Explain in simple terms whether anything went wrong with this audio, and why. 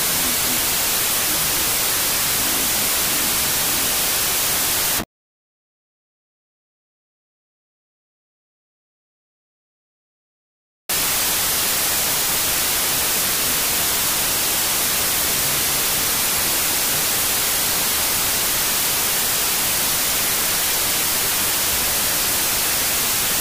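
Something went wrong for the whole clip, from start to finish: it's a wrong sample width problem. The audio was saved with 32-bit samples but played back as 16-bit, so each real sample gets split into two pieces. Half of those pieces are the fine low-order detail, which comes out as loud hiss. The real sound is buried underneath, running at half speed and an octave lower than it should.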